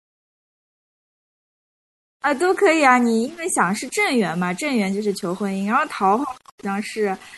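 From start to finish, a grainy, rough distortion rides on the speech and changes with it. Quiet syllables and trailing ends of phrases turn gritty or break into a sputter, and the texture stays attached to the sound. This is low bit depth without dither, likely from rounding to very few levels, about seven bits' worth. With no dither to decorrelate it, the error sits roughly 30 dB below the signal and follows the speech instead of forming a steady hiss.

Also throughout, the speech has a watery, swirling quality. Sibilants carry metallic chirps, and consonant onsets sound smeared. These are the marks of MP3 compression, plainly audible and likely the result of a low bitrate, around 64 kbps. The encoder ran short of bits, so it dropped weaker frequency components. Those components then flicker on and off from frame to frame, which produces the swirl and the chirps.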